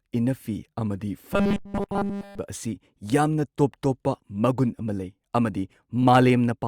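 Robotic sound from repeated short buffers runs from 1.34 to 2.39 s, between "ꯏꯟꯅꯐꯤ ꯑꯃꯗꯤ" and "ꯑꯁꯤ ꯌꯥꯝꯅ ꯇꯣꯞ ꯇꯣꯞꯄ". The speech becomes a rigid metallic buzz at 200 Hz, likely because audio arrived too slowly and essentially all of that stretch was filled by looping about 5 ms of sound.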